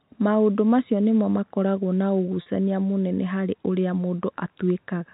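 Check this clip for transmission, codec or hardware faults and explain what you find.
There is one transmission fault in this speech clip. Packet loss with pitch repetition occurs from 2.42 to 2.46 s, where about 40 ms of audio went missing, which fits two lost 20 ms packets. The receiver hid the gap by repeating the last pitch period it had received and fading that copy down. Because the loss is short, the speech does not drop to silence. Instead it briefly holds on a slightly buzzy, frozen tone before the real signal returns. The telephone-band G.711 coding underneath passes nothing above 4 kHz.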